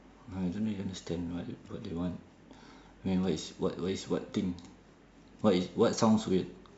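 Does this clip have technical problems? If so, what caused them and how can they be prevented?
No, nothing stood out as a technical problem on listening, so there is no cause to trace and nothing that needs preventing.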